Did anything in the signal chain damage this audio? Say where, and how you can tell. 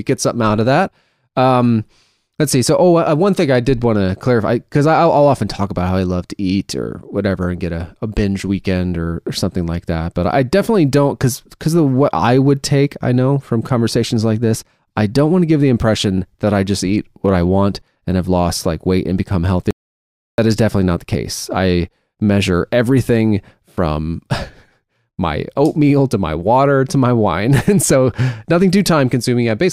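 Yes. An audio dropout to silence interrupts the speech from 19.71 to 20.38 s, roughly 0.68 s. The waveform flattens abruptly, and the spectrogram shows a blank band with no room-tone floor. The input was likely lost at the device or link while recording continued.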